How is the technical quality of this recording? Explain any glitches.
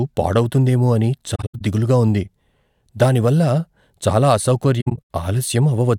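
The speech has two brief dropouts from AAC frame loss with muting. The first runs from 1.35 to 1.61 s, between "పాడవుతుందేమో అని" and "దిగులుగా ఉంది", and the second from 4.81 to 4.99 s. Lost frames were decoded as silence, and the overlapping windows fade the sound softly out and back in. On a spectrogram, each fault shows as broken vertical gaps where the full spectrum goes empty, the longest lasting about a tenth of a second. The waveform tapers smoothly into and out of these holes.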